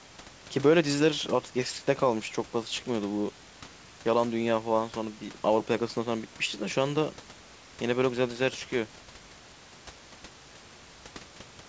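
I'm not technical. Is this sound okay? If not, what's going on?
Yes, nothing in this speech recording stood out as a problem when I listened to it.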